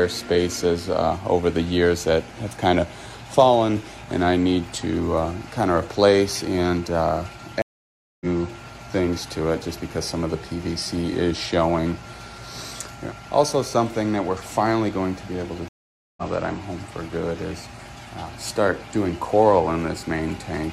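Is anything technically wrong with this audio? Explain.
Yes. There are two stream reconnects, at 7.62–8.26 s and 15.68–16.22 s. Each time the connection dropped and the player restarted its decoder mid-stream. You hear a gap of about 0.59 s and then about 0.49 s, after which the audio picks up further along, skipping roughly half a second the first time and about 0.3 s the second time.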